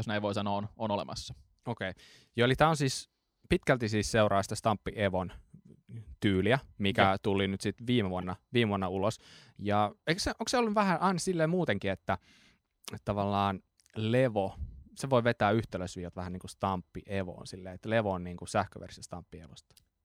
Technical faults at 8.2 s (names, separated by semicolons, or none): corrupt frame decoded